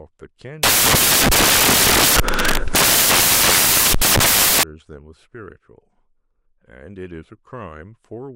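A speech clip with one clear fault. From 0.63 s to 4.63 s, the samples are built from the wrong bytes. The reader combines each sample's bytes incorrectly. It may be off by one byte, or it may have the byte order swapped. Either way, the rapidly changing low bits end up as the large part of each value. The result is four seconds of loud, harsh broadband noise.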